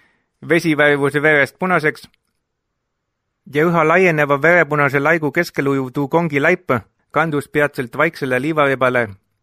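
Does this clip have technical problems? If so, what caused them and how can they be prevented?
No, there are no technical problems to report here.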